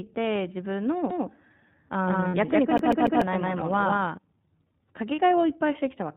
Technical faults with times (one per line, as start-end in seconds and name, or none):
0.00-6.16 iLBC codec
1.10-4.18 doubled audio track
2.28-2.35 lost iLBC frames
2.78-3.21 CD stuck on one turn
5.15-5.20 lost iLBC frames